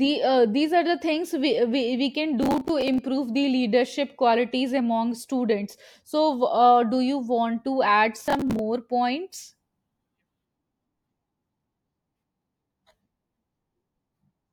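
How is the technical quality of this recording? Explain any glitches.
Two bursts of processor overload crackle mark the speech, from 2.43 to 2.98 s and from 8.20 to 8.59 s. The processor misses many buffer deadlines in a row, replaying stale audio in short pieces of roughly 10 ms. The hard edges sound like gritty tearing.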